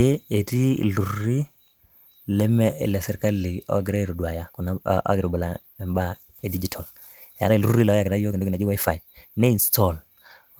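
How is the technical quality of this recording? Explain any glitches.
One timing glitch affects the speech. A time-stretched section runs from 4.02 to 9.62 s at 1.6 times speed, likely squeezed by software dropping short slices while preserving pitch, so it sounds rushed.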